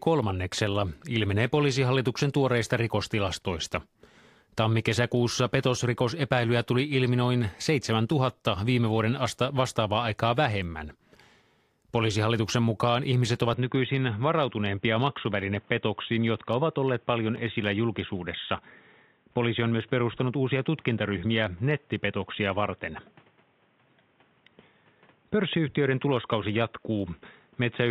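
At 13.54 s the speech abruptly turns dull and boxy and stays that way to the end. Everything above about 3.8 kHz is gone, and a new background noise sits roughly 35 dB under the speech. There is no gap at the change, and the loudness stays about the same. The likely cause is an input switched to a poorer device, a different microphone or a headset call profile with a narrower band and its own noise floor.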